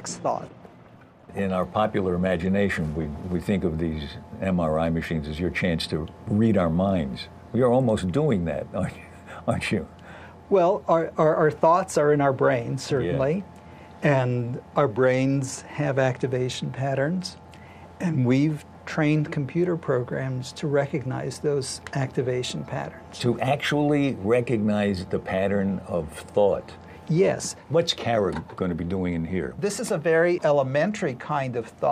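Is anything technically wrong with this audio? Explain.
No, nothing technically wrong can be heard in this audio; the signal stays intact and steady throughout.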